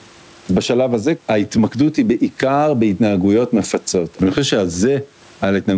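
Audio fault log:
throughout, gain pumping: The level swings by around 15 dB. Loud and quiet passages of the speech sit unnaturally close in level, giving a squashed, breathing sound. The likely cause is input gain set far too high for the microphone, with a fast limiter or compressor clamping down on each peak and releasing during the gaps. The top end stops at 8 kHz, as expected from a wideband call codec.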